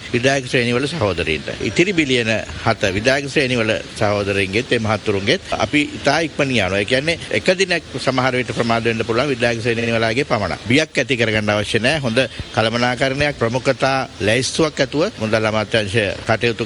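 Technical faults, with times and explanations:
9.78 to 9.87 s, repeated frames: a single short block of about 46 ms plays three times in a row, so the sound stutters there. The length of the block points to one compressed frame being written or sent more than once. The decoder plays each copy as it arrives. The two extra plays add about 93 ms, and the audio after this point runs later by that much.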